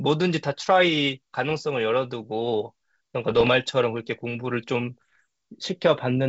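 Bit errors on an ADPCM link hit at 1.50–1.58 s, 3.30–3.49 s and 5.00–5.21 s: flipped bits derail the decoder's step size, giving pops and rough bursts, seen as broadband vertical streaks and jagged level jumps.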